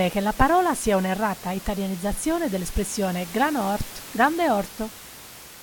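No technical faults can be heard in the speech signal, and the only other sound is the ordinary background noise of the room, sitting about 17 dB below the speech.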